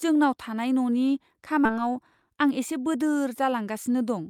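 It's a speech clip with two hiccups close together. First, there's a skip ahead at 1.65 to 1.67 s. Playback jumps straight over something like most of a second of speech with no fill at all, so the two sides butt together almost seamlessly and you just lose a chunk of what was said. That's a stretch being dropped, on the way or by the jitter buffer, while later audio was already queued, which also cuts the delay by roughly the same amount. Then from 2.28 to 2.52 s there's a jitter buffer speed-up. Speech runs at about 112% speed, but pitch stays put, so it sounds briefly hurried rather than chipmunky. The receiver is trimming short pitch-period-sized slices, a few tens of milliseconds in total, over and over to work off the extra audio it was holding.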